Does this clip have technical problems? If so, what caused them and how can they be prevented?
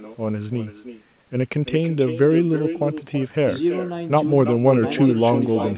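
Yes. An echo with no canceller runs through the whole speech clip: every phrase is shadowed by a copy about 10 dB quieter that arrives roughly a third of a second later, sounding thinner. The far end plays the call over a loudspeaker, its microphone picks that sound up, and nothing removes it before it travels back.

On a waveform, each burst of speech trails a smaller repeat. On a spectrogram, whose content stops at 4 kHz because of the narrowband G.711 call codec, every syllable has a fainter ghost offset to its right.

Turning on acoustic echo cancellation at the far end, or having that listener use headphones, would prevent it.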